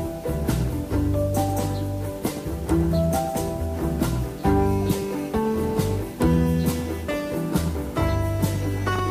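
From the first moment to the last there's a steady, even hiss sitting under the sound, and that's low bit depth with dither. The audio has been squeezed down to around 7 bits, and before rounding to those few levels a little random noise was mixed in, so the rounding error comes out as flat white noise instead of harsh distortion. With so few bits, the hiss is loud, roughly 25 dB below the signal, and it never changes character.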